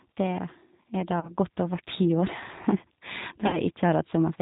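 Speech coded throughout with the G.729 codec at 8 kbit/s: nothing above 4 kHz survives, and the voice has an audibly rough, synthetic, model-built texture. VoIP packet loss concealed by the speech codec occurs at 1.20–1.35 s and 3.47–3.59 s, where about 30 ms and 60 ms of audio are extrapolated into a fading buzzy tone or coloured noise, which fits one and two lost packets.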